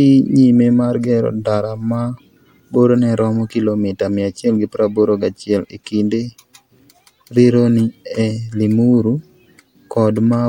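No technical faults can be heard in the recording at any point.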